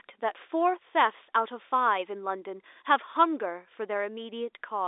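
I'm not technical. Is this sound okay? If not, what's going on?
Yes, the speech comes through an ordinary landline-style telephone channel that is doing its job, which is why it has the narrow, phone-like sound of a line that carries nothing above about 3.8 kHz, and no technical problems can be heard.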